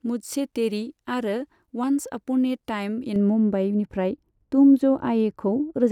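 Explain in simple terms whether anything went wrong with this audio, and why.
From 3.16 s to the end at 5.91 s, the speech turns dull and muffled from de-emphasis applied wrongly. The treble fades gradually rather than stopping at a sharp cutoff.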